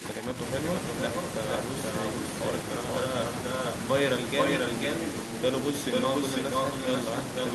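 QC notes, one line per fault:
0.0–0.4 s, speech suppressed in double talk: the speech sinks by about 5 dB for around 300 ms in this opening stretch and then comes back up. The level dips rather than dropping out completely. This is likely an echo canceller that heard both ends active at once. It couldn't tell the near talker from the loudspeaker echo and pulled the whole signal down to be safe.
0.76–2.22 s, 2.9–3.73 s, 4.38–5.36 s, 5.92–7.54 s, echo leak: the speech is shadowed by a second copy of itself just under half a second later. The lag is 477, 483, 488 and 494 ms, so it grows slightly across the clip. In the first two runs the copy sits about 5 dB below the speech. In the last two it is about as loud as the speech. The likely cause is a far-end loudspeaker whose echo canceller let its microphone pickup through, which sent the talker's own audio back down the line.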